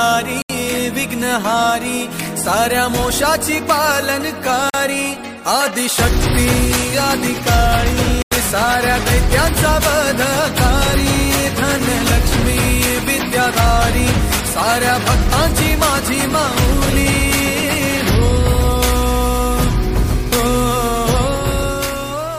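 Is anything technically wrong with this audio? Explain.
Yes, three Bluetooth stalls: at 0.42, 4.70 and 8.22 s the sound drops to silence for 75, 42 and 93 ms and then resumes, likely from interference delaying packets until the headphone buffer ran dry.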